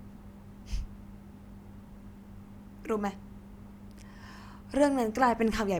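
Nothing in this recording stands out as a fault, with the talking running along steadily and nothing breaking in at any point.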